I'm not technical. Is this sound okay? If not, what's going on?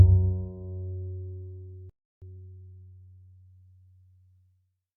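No. At 1.90 s the sound simply stops, and for about a third of a second, until 2.22 s, there is silence. This is a playback stall: the player most likely ran short of data or was briefly held up, so it had nothing to play. Unlike a tiny click or dropout, the gap is long enough to notice clearly, and then the sound carries on.

Straight after the pause, from 2.22 s to 3.50 s, the sound plays about 1.25 times faster than normal while staying at its usual pitch. This is time-compressed catch-up: the player trims tiny slices and blends the joins to make up for the lost time. A sped-up tape would also sound higher, but here the pitch does not change.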